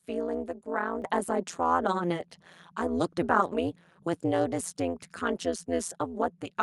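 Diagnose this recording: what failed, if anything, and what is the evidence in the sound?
Overlap-add ripple from frame-based call processing: the level rises and falls by about 60 dB around 150 times a second throughout the speech, giving a metallic buzz with extra tones around each note. The waveform shows a regular comb-like envelope, and the spectrogram shows matching vertical striping.

Microphone volume stepped up by the call software's automatic input gain: at 1.02 s speech and background jump together by about 6 dB. The waveform shows a sudden, lasting step in amplitude.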